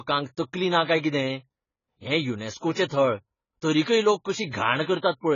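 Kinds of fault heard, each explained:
AAC compression: The speech is dull throughout, with nothing above 7 kHz, and the damage is heavy: sibilants come out smeared and fizzy, and sustained sounds take on a swirling texture. The likely cause is an AAC-LC transform codec working at a very low rate, around 16 kbps, lowering its cut-off and starving bands of bits. A simple low-pass filter would dull the top end but leave the remaining band clean, without this grainy, unstable texture.
Pre-echo: A short hiss runs ahead of two sharp onsets just before "थळ तरीकय लोक": one from 2.57 to 2.63 s, spread over 52 ms, and one from 2.88 to 2.91 s, over 26 ms. The codec spread its quantisation noise across a whole block, so noise sized for the loud attack also fills the quiet gap before it, and the attacks sound softened. Unlike an ordinary echo or reverb tail, this smear comes before the sound, not after it.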